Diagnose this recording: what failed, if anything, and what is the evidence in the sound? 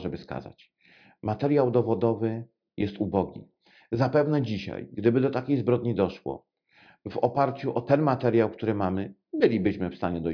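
Nothing failed; no faults present.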